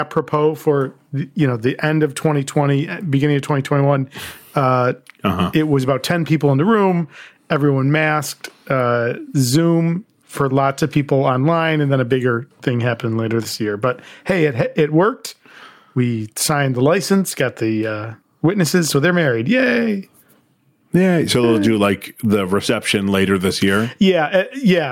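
The speech in this clip has a breathing, pumping quality throughout: the level is pulled down as soon as a louder syllable arrives. That level swing is around 5 dB, and loud and quiet passages sit unnaturally close together, giving a squashed, crowded sound. This is gain pumping, likely caused by the input gain being set far too high and a fast limiter or compressor clamping down on each peak.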